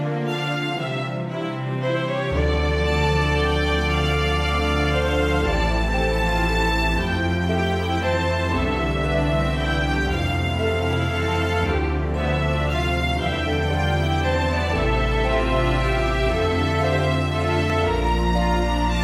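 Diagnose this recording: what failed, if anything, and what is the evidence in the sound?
Four isolated clicks sit at 8.03, 10.93, 13.75 and 17.70 seconds, each a single sharp tick with no gap in the sound around it. These are most likely dropped samples at the driver or buffer stage, where a fraction of a millisecond of the stream goes missing and the waveform jumps straight to a later value. On a spectrogram each appears as a thin vertical line running up the full band; in the waveform, as a sudden step discontinuity.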